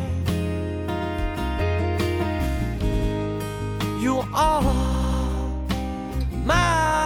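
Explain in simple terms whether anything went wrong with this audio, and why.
Yes, something went wrong: there are three patches of repeated frames. At 1.00 s a chunk of about 93 ms plays one extra time, at 2.90 s the same-sized chunk plays twice more (to 3.09 s), and at 4.90 s three more times (to 5.18 s). That chunk length fits a couple of compressed frames being written or sent again, so the decoder replays them and you hear a stutter. Together the repeats make the audio roughly 0.56 s longer.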